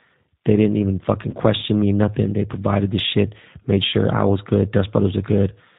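G.729 codec damage runs through the whole speech clip, and the roughness and slightly synthetic edge point to an 8 kbit/s G.729A stream. The decoder rebuilds the voice from a vocal tract filter, a pitch predictor and a few pulses per frame, and nothing above 4 kHz gets through. VoIP packet loss concealed by the speech codec appears twice. From 1.31 to 1.36 s, just after "didn't even fucking" and before "me nothing", about 20 ms of audio goes missing, which fits a single lost packet. From 3.89 to 3.94 s, between "provided this shit made" and "I was good", about 40 ms goes missing, which fits two packets. In each gap the decoder stretches its last pitch and filter state into a fading buzzy tone or coloured noise, and the voice stays weak or distorted briefly after the audio resumes.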